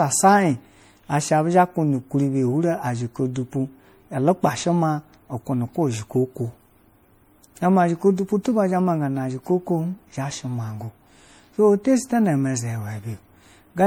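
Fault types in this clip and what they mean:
generation loss: swirly, hollow speech with blurred attacks, likely from about four MP3 re-encodes; the spectrogram shows patchy holes, smeared onsets and nothing above 20.9 kHz.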